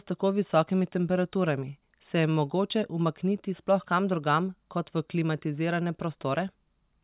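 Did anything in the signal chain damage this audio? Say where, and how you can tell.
No, nothing in the chain audibly damaged this speech.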